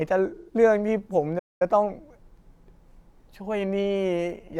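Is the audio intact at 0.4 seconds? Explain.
No, 0.4 seconds falls inside an AAC frame loss with concealment running from 0.35 to 0.53 s. About 128 ms of coded data went missing, which points to a short run of consecutive frames, and the decoder patched the gap by reusing the last good spectrum with altered phase. It sounds like a brief smeared, hissy, phasey blur. On a spectrogram the harmonic detail turns into a diffuse, noisy smear, and the waveform loses its clear periodic shape.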